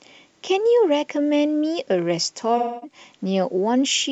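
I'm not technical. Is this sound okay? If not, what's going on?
No. From 2.57 to 2.98 s the speech turns smeared and hazy. That is AAC frame loss with concealment: about a quarter second of compressed audio went missing, and the player patched the gap by stretching what it last heard.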